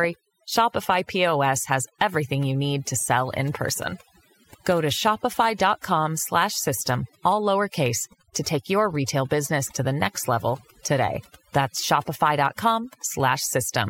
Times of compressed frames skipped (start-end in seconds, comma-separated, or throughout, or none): none